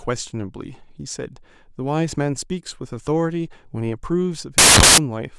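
At 4.58 s the speech gives way to a burst of loud, harsh broadband noise lasting until 4.98 s, about 0.4 s. This is samples built from the wrong bytes: each sample's bytes were assembled in the wrong order or offset, so the rapidly changing low bits became the dominant part of every value. On a waveform the span fills out with dense, random-looking excursions. A spectrogram shows a broadband wash covering the whole frequency range.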